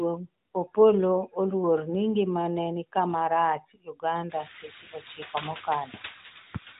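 Noise suppressor artifacts run through the whole speech clip. A suppressor estimates the steady background noise and pulls those bands down, frame by frame. Here it takes off only about 5 dB, so the noise dips in the pauses and returns under the speech. The room noise climbs by about 22 dB around four and a half seconds in. The speech stays narrowband, with nothing above 3.8 kHz.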